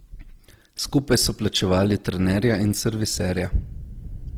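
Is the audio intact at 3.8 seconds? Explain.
No. At 3.8 seconds the speech carries Opus compression, present across the whole clip rather than at that moment alone. The likely cause is encoding in Opus's music mode at a low rate, about what 16 kbps would give. Each band's energy is kept but filled with folded or noise-like content, so the speech sounds grainy and rough, plainly audible, while the bandwidth stays full, reaching about 20.2 kHz.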